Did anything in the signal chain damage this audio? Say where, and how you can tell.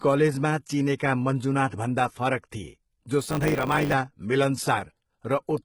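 Yes. Codec stage: gritty, lispy s sounds throughout and a rebuilt treble whose harmonics do not line up with those below point to likely HE-AAC compression at a very low bitrate.

Pre-echo, also at the codec: from 0.98 to 1.00 s, 24 ms of hiss smears ahead of a sharp attack, seen as noise before the waveform onset.

Buffer stage: from 3.2 to 3.94 s, a block size mismatch (truncated) adds a 100 Hz buzz. A spectrogram shows evenly spaced vertical lines, and the speech runs 1.09 times fast.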